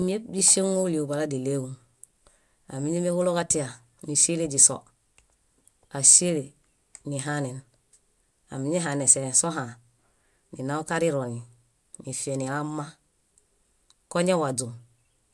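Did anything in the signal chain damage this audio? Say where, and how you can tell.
No, nothing in the signal chain audibly damaged this speech recording. Every stage it passed through leaves no mark a listener can point to, so there is no place in the chain to single out.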